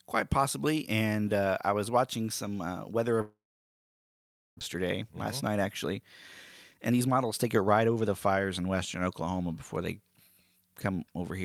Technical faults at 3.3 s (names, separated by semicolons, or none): long network dropout